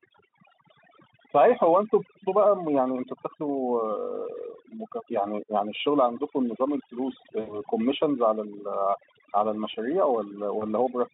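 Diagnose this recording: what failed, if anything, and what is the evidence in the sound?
Overdone noise removal in the call-processing stage runs through the whole speech clip. The background drops to near silence, with twinkling specks where residual noise bins flicker on and off. The suppressor is set too aggressively: it pulls individual frequency bands far down whenever they sit near its noise estimate, and quieter parts of the speech fall below that threshold and are removed with the noise.

VoIP packet loss concealed by the speech codec appears twice. From 7.39 to 7.60 s, a gap of about 80 ms that fits four 20 ms frames, the last sound is stretched out and fades. It stays weak for a moment after the packets return. At 10.59 s a shorter dropout, which fits a single frame, gives a brief smear. The Speex decoder, carrying a narrow 150 Hz to 3.7 kHz line, fills each gap by extrapolating from its last pitch and filter and lowering the gain frame by frame.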